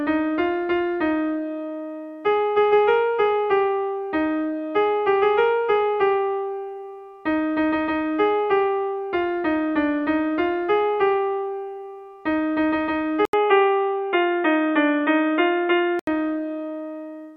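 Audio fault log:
13.25–16.07 s, input switched to a poorer device: after a brief gap of about 80 ms, the sound abruptly turns dull and boxy, with nothing above 3.8 kHz, a level shift of roughly 5 dB, and a faint new background noise well below the signal, before clearing again at 16.07 s. The cause is likely the recording input switching mid-capture to a narrower-band microphone or a headset's call profile, with its own tone, gain and noise floor.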